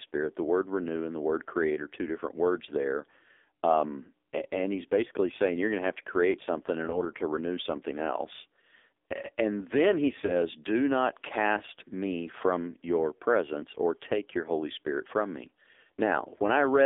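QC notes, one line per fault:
Throughout: AMR narrowband mobile codec. The speech sits in a narrow telephone band of about 300 Hz to 3.6 kHz with nothing above 4 kHz. At 5.9 kbps the coding damage is heavy, giving a buzzy, synthetic tone. Unlike plain band-limiting, the voice itself is rebuilt from a vocal tract model and sounds artificial.
6.90 to 7.04 s and 10.26 to 10.35 s: lost AMR speech frames. Each is a single lost 20 ms frame, after "to create something in" (just before "to renew something else") and after "then he". The decoder reuses the last good settings at falling gain, so each is a brief dip or warble rather than a hard dropout or click.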